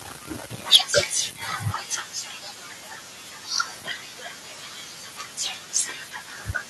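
Microphone overload from 0.73 to 0.76 s: the speech peaks run about 10 dB past the converter's ceiling, with roughly a fifth of the samples flattened at the limit. The likely cause is an input volume set too high, and the cut-off tops give those syllables a harsh, crackly edge.

Microphone volume stepped down at 0.76 s: right after that distorted burst, speech and background both fall by about 4 dB in one abrupt step. This is likely the call software reacting to the clipping by lowering the device's input volume at once.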